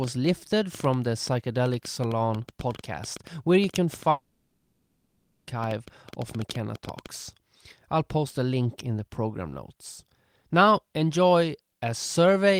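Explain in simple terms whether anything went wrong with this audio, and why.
A train of clicks runs from 0.04 s to 7.07 s: roughly fifty short, similar pops, about 7.7 per second at an uneven pace, audible over the speech and in its gaps. The likely cause is electrical interference or a faulty connection or power supply.

A long network dropout occurs from 4.10 s to 5.48 s. About 1.37 s of speech never arrived, so the receiver stretched the last sound into a fading buzz instead of playing silence. The speech then resumes, likely after a network interruption, with that stretch lost.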